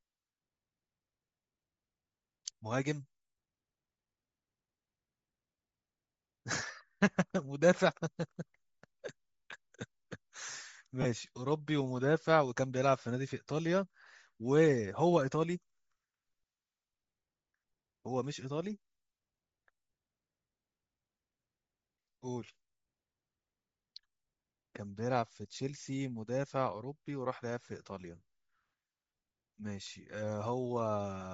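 Across the whole speech clip the voice has a breathy, grainy edge, with the upper spectrum hollowed out and replaced by hiss. That plainly audible damage is likely Bluetooth LC3 compression, filling emptied high bands with noise, which fits a low bitrate near 32 kbps.

From 11.02 to 11.06 s the speech briefly dissolves into a noisy smear lasting about 30 ms. These are lost LE Audio frames: the decoder repeated the last spectrum with scrambled signs, which fits three missing 10 ms frames.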